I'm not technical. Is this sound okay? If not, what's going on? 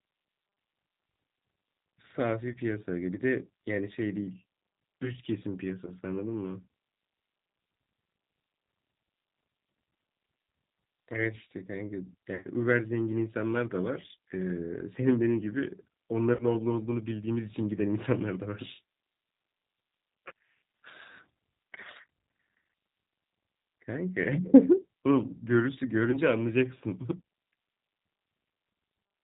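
No. The whole clip has gone through the G.729 codec, a phone-call compressor that rebuilds the speech from a simplified model. Everything above 4 kHz is gone. The speech is still easy to follow, but it sounds noticeably rough, thin and slightly artificial throughout.

There are also six short dropouts, from VoIP packet loss concealed by the speech codec. They occur at 2.52 to 2.58, 5.86 to 5.92, 12.35 to 12.48, 16.35 to 16.45, 20.28 to 20.32 and 26.11 to 26.19 seconds. Bits of the call never arrived. The decoder covered each gap by stretching the last sound into a brief buzzy tone or coloured noise that fades. The worst is at 12.35 seconds, where about 90 ms went missing.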